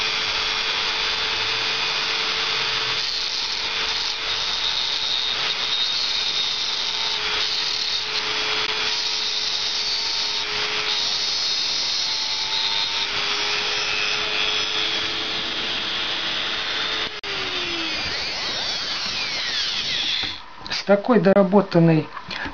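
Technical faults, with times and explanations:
8.67, 17.19–17.24 and 21.33–21.36 s, likely Bluetooth dropout: the audio cuts to silence for about 13, 40 and 27 ms, then resumes as if it had kept playing, with nothing held back. The lengths point to one, three and two lost packets of roughly 13 ms each, which arrived too late to play. On a waveform each is a flat gap with abrupt edges or a fade of a few milliseconds. On a spectrogram each shows as a narrow vertical blank band across all frequencies.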